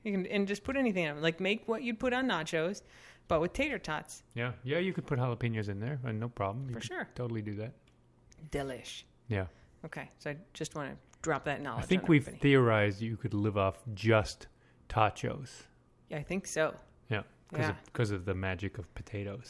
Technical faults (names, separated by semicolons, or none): none